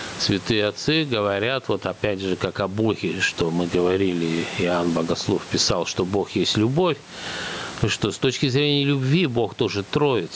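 Gain pumping runs through the clip. The gain swings by around 15 dB. Loud and soft parts sound squashed. The likely cause is gain set far too high, with a fast limiter pulling it down.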